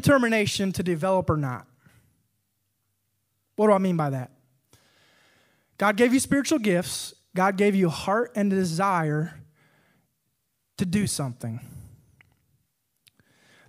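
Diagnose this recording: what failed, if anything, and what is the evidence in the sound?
Nothing in this speech recording points to a failure at any stage of the chain.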